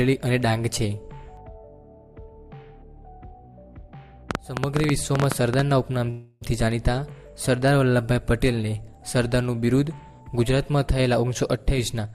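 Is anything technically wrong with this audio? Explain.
Yes, there are three separate problems.

From 4.31 to 5.60 s there's a train of clicks: about 15 similar pops at roughly 10.9 per second, irregularly spaced and peaking around 15 dB above the audio. It ticks right over the sound, most likely interference from nearby gear or a faulty connection or power supply.

At 6.10 s comes a call audio freeze lasting 311 ms, until 6.43 s. The last bit of sound is stretched into a fading buzz rather than going silent, then the audio carries on exactly where it left off. That points to packets likely held up so the jitter buffer ran dry.

From 11.16 to 12.14 s there's a jitter buffer speed-up. The receiver had banked too much audio, so it trimmed tiny pitch-period slices, roughly 150 ms in total, to catch up. The sound runs at about 113% speed with pitch unchanged and comes across rushed.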